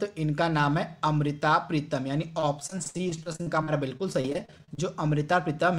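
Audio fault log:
2.39–4.79 s, repeated packet loss (robotic sound): packets kept dropping, with gaps up to 69 ms patched by stretching prior audio, making about a quarter of this stretch choppy.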